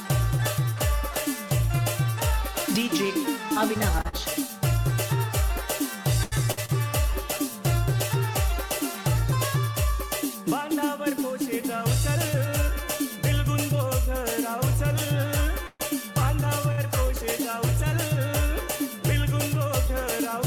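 From 3.91 to 4.15 s the sound breaks into repeated stalls (stutter): four gaps, the longest 44 ms, together 96 ms, about 41% of that short span. Packets arrived late, so the jitter buffer kept running dry, and each time the receiver held the last sound until fresh audio came. A second burst runs from 5.58 to 6.71 s, again four gaps but longer, 179 ms in total with one of 82 ms, where the held sound fades before playback resumes. Nothing is lost in either burst, but the audio drags and judders.

Between 11.31 and 13.90 s there is a jitter buffer speed-up. Too much audio had built up in the buffer, and the receiver trimmed it back by cutting out many tiny pitch-period slices, a tenth of a second or so in all. Playback runs at 103% with the pitch unchanged, so this stretch runs a little fast without sounding higher.

At 15.67 to 15.82 s comes a call audio freeze: 127 ms of the last sound carried on as a decaying buzz or hiss, ending in about 10 ms of silence before the audio picks up exactly where it stopped. 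The likely cause is packets held up in transit that emptied the jitter buffer, so a gap was inserted while nothing was dropped.

At 16.72 to 16.80 s a short stall from a late packet stretches the current sound by 60 ms. The receiver extended it while waiting, then continued from the same point, leaving one sound held too long with a faint buzzy dip.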